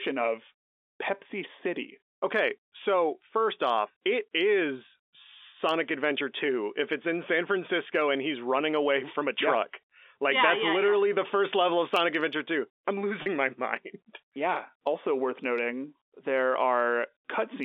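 At 13.22 s there's a brief packet loss with pitch repetition: roughly 40 ms goes missing, consistent with two 20 ms packets, and the concealment holds the last pitch period, leaving a short buzzy stretch until 13.26 s.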